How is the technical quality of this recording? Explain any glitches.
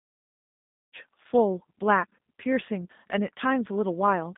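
The speech passed through a low-rate G.729 codec, and the damage is plainly audible from start to finish. The opening fade-in over roughly the first second is smooth.

G.729 codec, throughout: The speech appears to have passed through a low-rate G.729 path, consistent with about 8 kbit/s. That codec rebuilds each 10 ms frame from a filter model and a few pulses, and the line keeps only about 200 Hz to 3.7 kHz. The result is thin, band-limited speech with a rough, synthetic edge.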